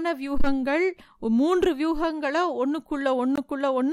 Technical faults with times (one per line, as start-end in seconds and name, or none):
3.36-3.38 Bluetooth dropout